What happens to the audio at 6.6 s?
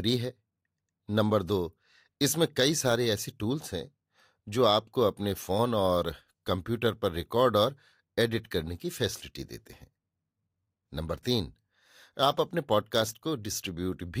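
Nothing goes wrong at 6.6 s; the speech runs on intact through that moment, with no dropout, click, glitch or change in level or tone.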